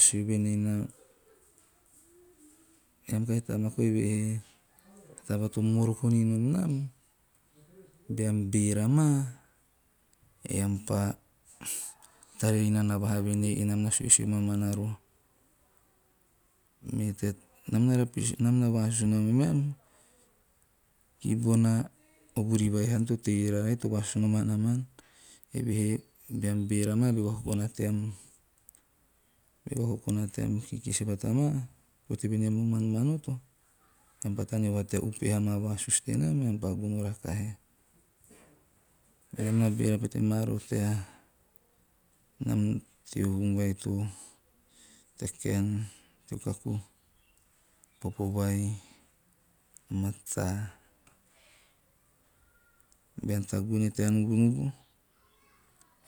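No technical faults can be heard anywhere in the speech recording. There is nothing to place on a timeline, so no events are listed.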